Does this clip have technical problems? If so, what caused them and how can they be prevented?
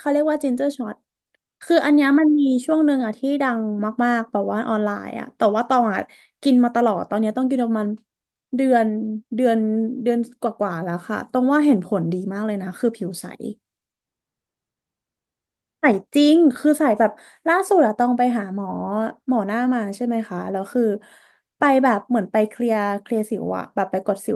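No technical problems are audible.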